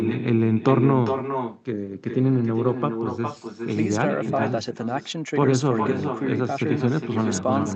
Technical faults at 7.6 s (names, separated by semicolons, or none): echo with no canceller